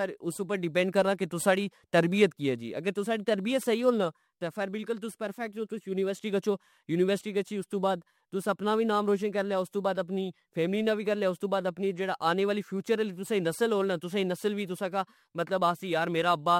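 A crude rate conversion runs through the whole recording, from start to finish. The sample rate was changed without any anti-aliasing filter, by simply dropping the nearest samples, and the repeating pattern of skips points to a 48 kHz to 44.1 kHz conversion. Those dropped samples leave an error sitting around 30 dB below the speech, heard as a gritty, inharmonic fizz that rides on louder syllables and sibilants.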